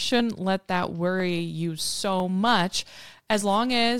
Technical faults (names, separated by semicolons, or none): clock drift buffer slips